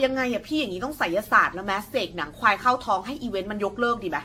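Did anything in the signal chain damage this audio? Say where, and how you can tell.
Yes, at the codec stage: the speech has been through repeated lossy encoding, likely generation loss from around ten AAC-LC passes. Throughout, it sounds swirly, smeared and hollow, with blurred attacks and nothing above 18.6 kHz, as each re-encode quantised afresh on a shifted frame grid.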